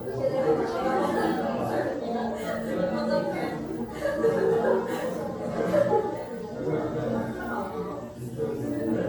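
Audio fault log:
throughout, generation loss: the audio sounds swirly, smeared and hollow, with blurred attacks and nothing above 18.7 kHz. This is likely from repeated lossy re-encoding, around seven passes, each requantising on a shifted frame grid so noise and spectral holes pile up, consistent with AAC near 96 kbit/s.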